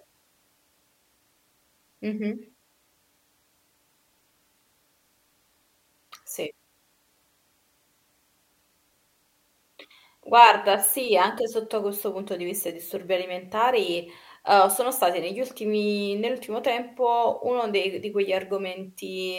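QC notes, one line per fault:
No faults heard anywhere in the speech.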